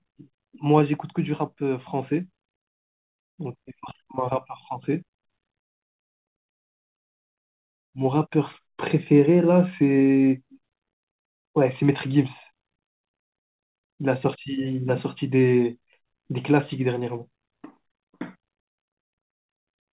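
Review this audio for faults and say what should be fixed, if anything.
Nothing stood out on listening to this speech, which comes through a G.711 mu-law call path with nothing above 4 kHz, so there is nothing here to fix.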